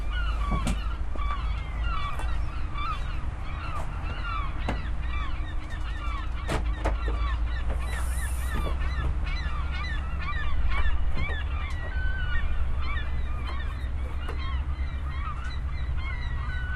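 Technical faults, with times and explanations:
Throughout: MP2 compression, likely the cause of the dull, gurgling, granular texture. Upper sub-bands switch off and flicker back, and the remaining bands sound coarsely quantised, which fits a rate near 80 kbps. Unlike reception burbling, this damage is steady rather than appearing in isolated bursts.
1.15 s: DAB burbling, a few brief watery blips. Bit errors at a very low rate, around a tenth of a percent, got past error correction and corrupted the audio data in a few frames, putting short blips of noise in single sub-bands. Unlike the steady compression dullness, this is a momentary watery burst.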